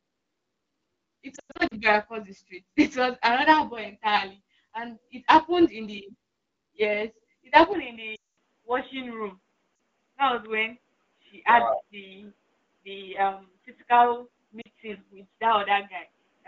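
Lost AMR speech frames break up this speech recording at 1.35 to 1.74 s, 8.15 to 8.34 s, 9.75 to 9.79 s and 14.61 to 14.68 s. Damaged frames failed their checksum, so the decoder bridged each gap by repeating its last good pitch and vocal tract settings at falling gain. The first episode loses 220 ms scattered across 360 ms, with its longest run at 100 ms, which fits about eleven 20 ms frames. It warbles and drops in and out. The 220 ms gap at 8.15 s drops to near silence within two frames, and the 40 ms losses at 9.75 s and 14.61 s are brief dips. From 7.73 s to the end, the input switched to a poorer device, likely another microphone or a headset call profile. Everything above 3.8 kHz disappears at once with no silence at the switch, so the sound turns dull and boxy. The level drops by about 5 dB, and a new noise floor appears roughly 45 dB below the signal. The AMR wideband (HD Voice) codec itself, apparently running at around 12.65 kbit/s, leaves only light coding damage.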